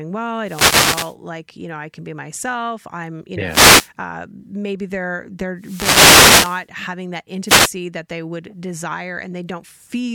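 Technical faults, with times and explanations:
0.44–1.16 s, 3.45–3.91 s, 5.57–6.68 s and 7.45–7.72 s: wireless microphone noise hit. Each is a short burst of static over the speech. The second follows "be myself I'm you". The radio signal fades as reflections cancel. Receiver noise then rises and masks the voice.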